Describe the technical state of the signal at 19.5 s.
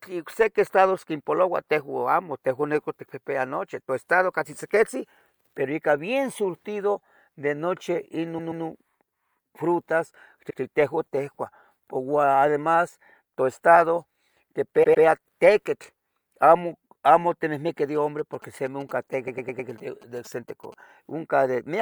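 A nearby 2G phone is exchanging signalling with its network from 17.95 to 20.74 s, and the audio circuit rectifies those radio bursts into the signal. The result is a galloping dit-dit-dit pattern of short buzzes at 217 Hz, roughly 25 dB below the speech.

Overlapping that, from 19.27 to 19.69 s, a run of compressed frames was sent or written twice, so the decoder replays the same stretch of speech. The length fits four blocks of about 105 ms, adding 418 ms, and it sounds like a stutter.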